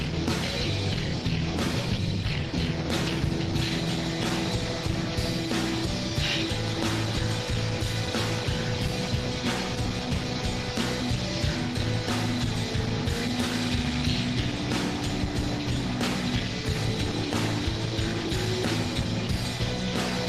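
No technical faults can be heard anywhere in the recording; the signal holds steady and continuous from its opening moment to its close.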